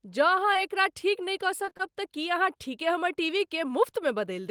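Speech with two network faults. At 0.53 to 0.57 s, just before "एकरा ठीक नहि कऽ", there is a short concealed packet loss. About 20 ms of audio never arrived, and roughly 15 ms was patched by extending the preceding sound, which is heard as a brief smear or wobble. On a spectrogram, the harmonics or noise texture carry on unnaturally flat across that sliver, with a soft seam where the real signal resumes. Between 1.65 and 1.81 s, after "एकरा ठीक नहि कऽ" and before "तऽ की अहाँ ठीके", repeated packet loss gives a choppy, robotic stretch. Four gaps totalling about 80 ms, the longest about 23 ms, were each filled by continuing the last sound, so about half that span is synthetic. The waveform shows repeated, near-identical short cycles broken by abrupt joins. The spectrogram shows frozen, smeared harmonic bands in several blocks instead of smooth movement.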